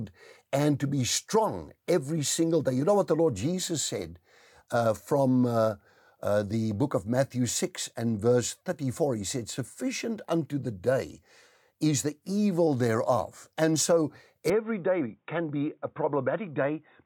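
Input switched to a poorer device at 14.50 s, likely: with no gap, the speech abruptly turns dull, losing everything above 3.8 kHz, and drops about 5 dB through the end.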